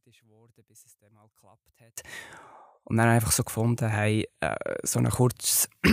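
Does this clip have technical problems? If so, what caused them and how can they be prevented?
Yes. One channel inverted, from 0.0 to 1.98 s: the speech drops by about 34 dB, leaving only a faint trace. The likely cause is reversed polarity on one stereo channel, so the speech common to both cancels when they are summed to mono. Checking polarity on each channel and monitoring in mono before recording or export would prevent this.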